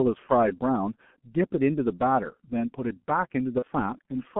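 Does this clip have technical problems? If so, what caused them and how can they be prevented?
Yes. The whole clip carries G.723.1 codec damage, and it is heavy. Sound is confined to roughly 150 Hz to 3.4 kHz, so it sounds muffled. The coarse, slowly updated voice model leaves it hoarse with smeared consonants. This fits a bitrate near 6 kbit/s. To prevent it, use a wideband, higher-bitrate codec such as Opus.

There is also VoIP packet loss concealed by the speech codec, from 3.59 to 3.64 s. The gap fits one lost 30 ms frame. The decoder filled it by extending its last pitch and filter at falling gain, so the sound briefly blurs. To prevent it, use a jitter buffer, forward error correction, or a more reliable network path.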